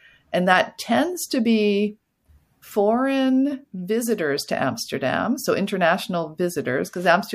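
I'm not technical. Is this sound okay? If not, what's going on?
Yes, nothing in this recording sounds wrong.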